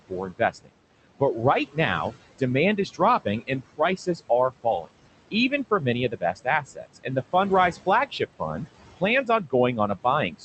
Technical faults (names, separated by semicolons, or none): noise suppressor artifacts; speech cut by the noise suppressor